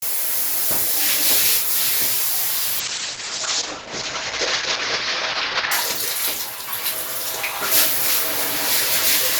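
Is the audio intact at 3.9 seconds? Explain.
No, 3.9 s falls inside a call bitrate drop running from about 2.83 to 5.77 s. The call's bandwidth estimate sagged, so the encoder got starved of bits, which fits a fall from roughly 64 kbps to 8 kbps. It codes everything far more coarsely and chops the top end from 20 kHz down to 8 kHz, so the sound goes dull, rough and watery until the rate climbs back.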